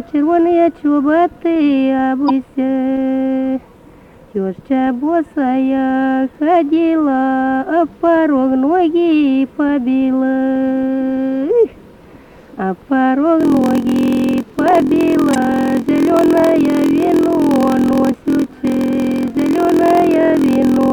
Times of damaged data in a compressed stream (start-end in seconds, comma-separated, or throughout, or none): 2.26-2.31, 15.32-15.36